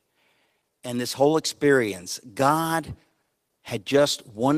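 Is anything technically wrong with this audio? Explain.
Yes. There are two related timing faults in this speech clip.

Clock drift between sender and receiver runs through the whole clip. The sending side's audio clock is about 4% slower than the receiver's, so samples arrive more slowly than they are played out. The jitter buffer keeps draining, and the receiver has to patch the shortfall. You hear this as a faint, persistent unsteadiness in pacing rather than a single glitch. On a waveform there is no one obvious break, only a series of small discontinuities across the clip.

Repeated timing corrections occur from 0.46 s to 4.54 s. To keep the drained buffer from running dry, the receiver repeatedly duplicates short fragments, all in the same stretching direction. Together they add roughly 150 ms and leave the speech playing at about 97% of its natural pace. The edits are unevenly spaced and heard as slight hiccups and a slightly dragging rhythm. 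On a spectrogram, harmonic bands show brief stutters or repeated slivers at irregular points. The waveform shows tiny seams where segments were doubled.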